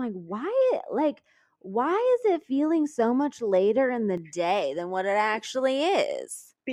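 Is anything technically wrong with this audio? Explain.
Yes. From the start to about 4.18 s the speech sounds dull and muffled, as if heard through a thick cloth, and the brightness returns just before "day than what it". This is de-emphasis applied wrongly: a treble-cutting filter meant to reverse pre-emphasis was applied to audio that had none, or applied a second time. The response rolls off smoothly toward the top, sitting about 11 dB lower at 10 kHz than at 1 kHz.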